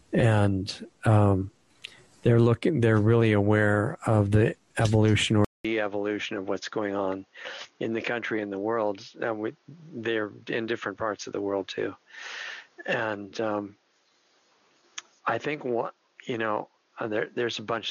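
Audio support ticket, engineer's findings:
At 5.45 s: 200 ms dropout, then nothing above 6.7 kHz, level about 5 dB down, new hiss. Likely input switched to a poorer device, not codec narrowing.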